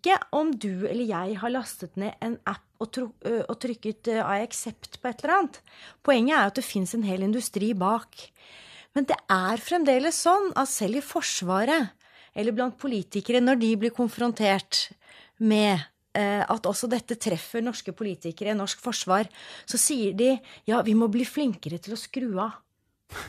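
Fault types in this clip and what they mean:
No technical faults are audible in this speech recording.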